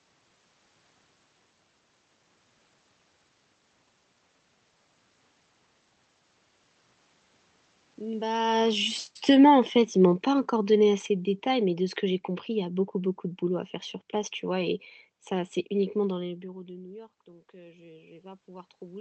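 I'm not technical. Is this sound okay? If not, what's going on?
No. From 8.22 to 12.77 s there is automatic gain falling. Just before 8 s the talker comes closer and gets louder, and the system's volume control reacts by slowly turning everything down. The room's background noise sinks along with the voice, which shows the turn-down comes from the system and not from the talker.

From 16.23 s to the end there is automatic gain rising. Around 16 s the talker moves away and gets much quieter, and the volume control gradually turns back up. Voice and room noise swell together over a second or more, which a talker simply moving closer would not cause.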